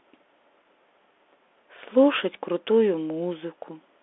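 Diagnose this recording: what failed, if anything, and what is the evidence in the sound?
The codec stage failed: a Bluetooth CVSD headset codec throughout the speech squeezes it into a 300 Hz to 3.5 kHz line band, silent above 3.8 kHz, with scratchy sibilants and granular hiss.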